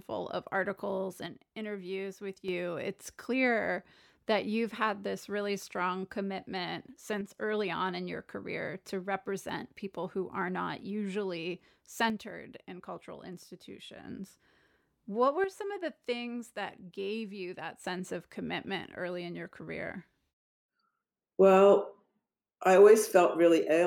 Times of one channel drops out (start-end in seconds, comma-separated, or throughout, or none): 1.26-2.48, 7.21-7.37, 12.10-14.04, 15.44-17.84